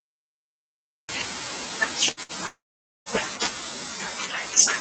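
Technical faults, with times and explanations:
0.0 to 1.09 s, cut-off start: the speech begins from digital silence and jumps straight in mid-sound at 1.09 s, with no natural onset or fade. The capture or stream evidently started late, so the opening of the utterance was never recorded.
2.11 to 2.20 s and 2.23 to 2.32 s, burst of packet loss: twice in quick succession the last sound is briefly held and dims, then the speech picks up slightly further on. Each time about 60 ms of audio failed to arrive, and the receiver stretched the last sound over the hole.
2.47 to 3.09 s, long network dropout: the last sound is held and fades out over roughly the first tenth of a second, then about 0.48 s of silence follows before the speech returns. Around 0.6 s of audio went missing, most likely a network interruption, and concealment covered the gap.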